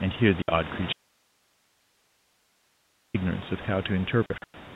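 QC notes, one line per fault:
0.42–0.48 s, packet loss filled with silence: a 60 ms hole with hard edges, consistent with three lost 20 ms packets replaced by silence.
0.93–3.14 s, audio dropout to a faint residue: the speech cuts out abruptly for 2.21 s, leaving only hiss roughly 45 dB down, likely a lost feed with the downstream path still live.
4.26–4.54 s, packet loss filled with silence: 180 ms of speech is missing in hard-edged silent gaps scattered over 280 ms, the longest 100 ms, fitting lost 20 ms packets.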